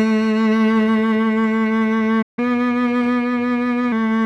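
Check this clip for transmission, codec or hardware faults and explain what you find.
Two related playback faults show up in this music, both around the middle of the clip.

At 2.22 s there's a playback stall: the music cuts to silence for about 153 ms, likely because the player's buffer ran dry, then resumes at 2.39 s.

Right after, from 2.39 to 3.92 s, there's catch-up at higher speed. The player resamples its backlog at 1.1x, so tempo and pitch jump roughly a semitone and a half, then settle back.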